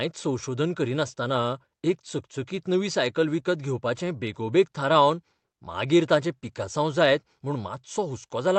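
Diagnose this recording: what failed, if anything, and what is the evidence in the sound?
Small hiccups run through the speech at uneven intervals, and the pacing never settles. The cause is clock drift between sender and receiver, at the network and jitter-buffer stage. The sending device's clock runs roughly 4 percent fast, so audio arrives slightly quicker than the receiver plays it out. The jitter buffer keeps overfilling and has to shed material, and the audio travels the call path with its top end capped near 8 kHz.

From 0.27 s to 8.48 s the speech sounds faintly hurried, with slight skips and an unsteady tempo, as if the delivery lurches forward now and then. These are repeated timing corrections: the receiver keeps trimming short slices out of the stream to keep pace with the faster sender, all in the same direction and unevenly spaced. The net effect is playback at 104 percent of the original rate across that stretch.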